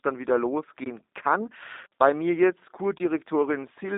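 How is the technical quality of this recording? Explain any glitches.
The quality is limited by G.729 codec compression for the whole clip. The speech has been squeezed through a low-rate voice coder, consistent with 8 kbit/s G.729A, rebuilt from a vocal tract model and sparse pulses, and confined to about 250 Hz to 3.7 kHz, so it sounds thin, slightly rough and synthetic.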